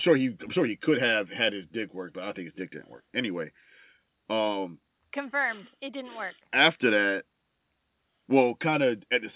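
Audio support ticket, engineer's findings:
Nothing stood out on listening to this speech clip, and the top end stopping at 4 kHz fits the narrowband call path it came through.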